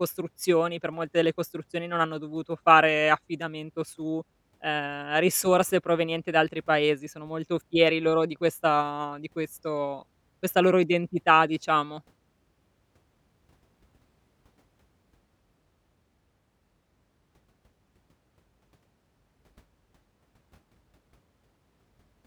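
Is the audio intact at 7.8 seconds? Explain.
Yes, the speech at 7.8 seconds is intact, with no dropout, click, distortion or other fault at that point.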